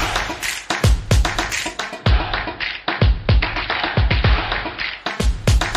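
Digital radio blending to analogue runs from 1.69 s to 5.40 s. The receiver lost its digital stream and cross-faded over 0.43 s to the station's AM broadcast, so the treble drops and a faint hiss sits far below the sound, with no level jump, before blending back.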